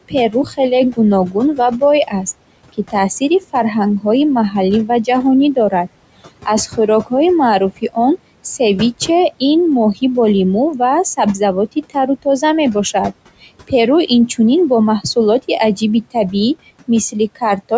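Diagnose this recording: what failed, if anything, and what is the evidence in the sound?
The room noise sits about 16 dB under the speech, yet it sinks between phrases and swells back beneath them. These are noise suppressor artifacts from the call processing stage: per-band gain pulls steady noise down by about 21 dB, frame by frame.

Parts of the speech sound swallowed at 0.02–2.14 s, 2.73–7.12 s, 10.79–12.42 s (just after "бо лимӯ"), 13.41–14.39 s, 15.01–16.33 s and 16.88–17.72 s. This is speech cut by the noise suppressor, with drops of about 15 to 21 dB. The suppressor misjudged those quiet speech bands as noise and attenuated them, for a fraction of a second in each span.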